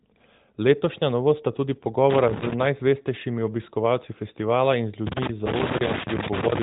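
Loose connector crackle bursts from 2.10 to 2.66 s, then again from 5.07 s to the end. A worn contact makes and breaks, chopping the speech into irregular scratchy pops. The speech is band-limited below 3.8 kHz, consistent with a light AMR-NB narrowband mobile codec, perhaps near 12.2 kbps.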